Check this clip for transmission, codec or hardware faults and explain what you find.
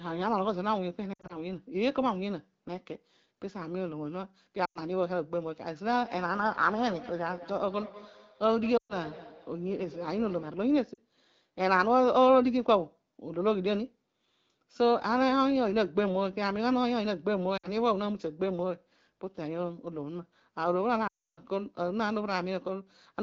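Two faults are present: repeated lost AMR speech frames, and a feedback echo between two devices, heard through an AMR wideband (HD Voice) path whose light coding character fits a rate around 12.65 kbit/s.

Lost AMR speech frames occur at 1.13–1.37 s, 4.65–4.81 s, 8.77–8.95 s, 10.93–11.00 s, 17.57–17.68 s and 21.07–21.40 s. Corrupted frames fail their check, so the decoder extrapolates from the last good pitch and spectral envelope while ramping gain down. The short gaps of 40–60 ms drop quickly toward near silence. The 100–120 ms losses fall to near silence within two frames, and the first one is scattered over 160 ms, with its longest run at 60 ms. The 300 ms loss at 21.07 s fades to near silence before speech returns rough and weak.

A feedback echo between two devices runs from 5.95 to 10.74 s. A second device in the same room replays the call, and this microphone picks it up again. 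The local echo canceller cannot remove it because it only models its own playback. Speech returns about a fifth of a second later, peaking about 16 dB below the direct speech. The repeats are thinner and more ringing than the original, and they overlap the loss at 8.77 s.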